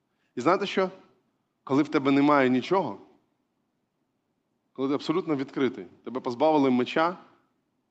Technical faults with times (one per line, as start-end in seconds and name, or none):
none